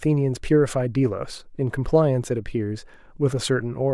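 No technical faults are audible.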